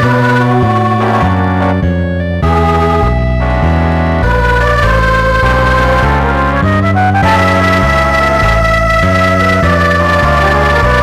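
Hard clipping runs through the whole clip: the signal arrives about 12 dB hotter than the stage can pass, so around a sixth of samples are cut flat at the stage's limit. Those squared-off peaks add high harmonics, heard as a harsh fuzz on every loud moment.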